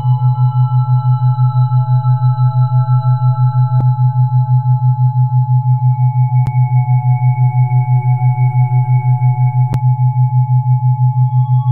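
CD skips occur at 3.81 s, 6.46 s and 9.73 s. Each time, the laser loses its place on the spiral track and lands on a different turn, so playback briefly mutes and then resumes from another point in the material. The gaps are tiny, a few milliseconds at 3.81 s and about 10 ms at the other two, heard as a sharp tick followed by an abrupt discontinuity where the sound jumps position.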